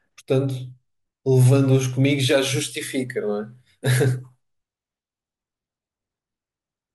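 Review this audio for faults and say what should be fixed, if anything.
Nothing stood out on listening to this speech recording, so there is nothing here that needs fixing.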